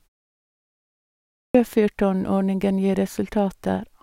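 At 1.33 s the output device, idle through the 1.33 s of silence before it, had to wake and relock. That produces a clipped start after a pause: the first 0.22 s of speech is swallowed, so it bursts in abruptly without its opening sounds.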